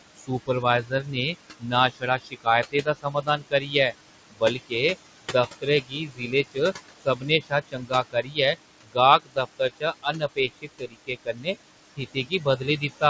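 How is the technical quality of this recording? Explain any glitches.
The recording has two audible problems, both from noise suppression: the background pumps throughout, and parts of the speech are pulled down along with it. The room noise sits about 11 dB below the speech, and nothing is heard above 8 kHz, which fits a wideband call codec such as G.722.

Noise suppressor artifacts run through the whole clip. The suppressor estimates the steady room noise and attenuates each frequency band it judges to be noise, frame by frame, here by about 17 dB. Because that decision changes from frame to frame, the remaining noise drops away in pauses and swells back under the speech.

Speech cut by the noise suppressor happens in four stretches: 0.16 to 3.93 s (roughly 1.5 s affected in total), 4.30 to 4.74 s (about 0.3 s), 5.22 to 6.58 s (about 0.7 s), and 7.01 s to the end. In these stretches the suppressor classed low-level speech energy as noise and attenuated it by about 20 to 22 dB at worst. 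Soft consonants, word endings and quieter syllables sound swallowed or faint, dipping below the surrounding speech.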